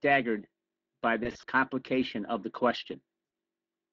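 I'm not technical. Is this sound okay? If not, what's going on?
No. At about 1.23 to 1.44 s, just before "complication of the", the speech briefly turns buzzy and smeared, fading in and out in short stutters, and again at about 3.25 to 3.31 s. This is VoIP packet loss concealed by the speech codec. Pieces of the call's data never arrived, so the Speex decoder guessed the missing sound by stretching what it had just played, letting it fade, and the voice takes a moment to recover.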